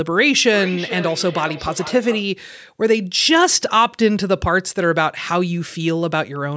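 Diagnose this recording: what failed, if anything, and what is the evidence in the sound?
Feedback echo between two devices in one room, at the call-processing stage: one device plays the other's audio, and that microphone recaptures it beyond its echo canceller's reach. From 0.54 to 2.3 s the speech returns roughly every 0.4 s, thinned and ringing, peaking about 13 dB down.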